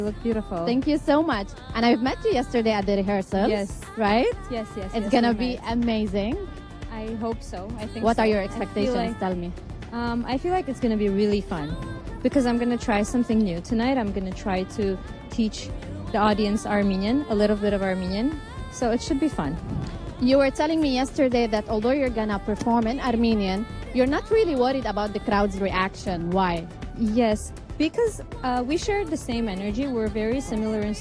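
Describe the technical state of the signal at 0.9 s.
At 0.9 s the signal is intact, with no audible technical fault at that moment.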